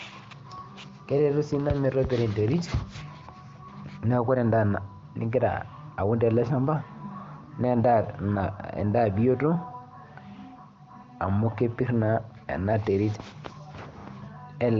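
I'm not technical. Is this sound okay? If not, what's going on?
Yes, it's fine: the speech comes through the AMR wideband (HD Voice) phone codec the way that codec normally sounds, with the very top end stopping at around 7 kHz, and nothing's going wrong anywhere.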